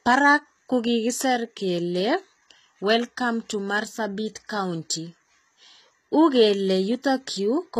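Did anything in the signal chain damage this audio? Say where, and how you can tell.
Yes, at the codec stage: plainly audible HE-AAC compression throughout, treble rebuilt by band replication sounding gritty and misaligned, nothing above 14.9 kHz, which fits a likely 20 kbps stream.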